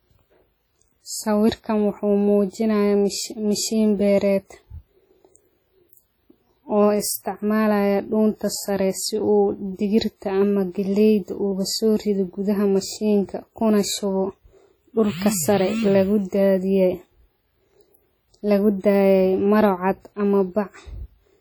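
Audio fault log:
Throughout: WMA compression. The speech rings and smears, with hiss breathing under it. This heavy damage likely comes from a transform codec at roughly 32 kbps.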